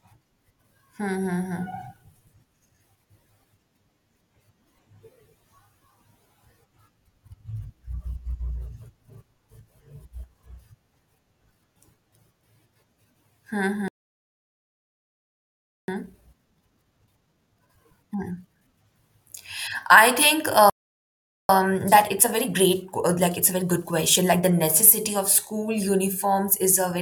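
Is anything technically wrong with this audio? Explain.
Yes. Twice the speech cuts out in a playback stall: from 13.88 to 15.88 s, a full 2 s gap, and again from 20.70 to 21.49 s, a break of about 0.79 s. The player most likely ran dry of buffered data or had its audio thread held up, so nothing reached the output until it recovered. Each time, the speech simply stops mid-flow and resumes after the silence.

After each stall, the player clears its backlog with time-compressed catch-up, from 15.88 to 18.88 s and from 21.49 to 24.49 s. It removes short slices of audio and cross-fades across the joins, so the speech runs at 1.25 times normal speed while keeping its pitch. The speech sounds rushed for those three seconds.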